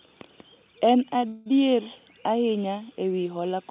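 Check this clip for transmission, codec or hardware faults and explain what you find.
There is one transmission fault, a call audio freeze from 1.28 to 1.48 s. The speech stops moving forward and the last sound is stretched into a fading buzz or hiss for about 177 ms. It never drops to silence. The likely cause is packets held up in transit, so the jitter buffer ran dry and the receiver filled the gap. When the audio resumes, nothing is lost. Everything after it simply arrives 177 ms later. The band stops at 4 kHz, as expected for G.711.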